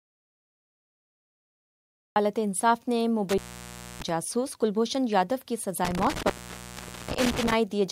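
The clip opens in dead, total silence that is already under way and lasts until 2.16 s, when sound arrives abruptly mid-flow. There is no hiss or room tone underneath, just silence. This is an audio dropout to silence: the input signal was likely lost through a disconnected source, a failed link or an accidental mute while the recorder kept writing empty samples. Whatever happened in those first seconds was never captured.

Between 3.29 s and 4.09 s, the sound breaks off with crackle at the edges of the gap, leaving only faint hiss for about 630 ms before it returns. The same thing happens again from 5.85 s to 7.53 s, with the line open for about 790 ms this time. This is intermittent contact: a loose plug or cable briefly parts, so the signal path opens and closes with scratchy clicks.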